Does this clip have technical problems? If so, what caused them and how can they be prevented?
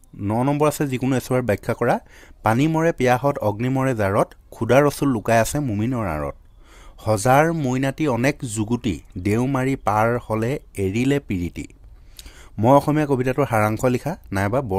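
No, no technical faults here.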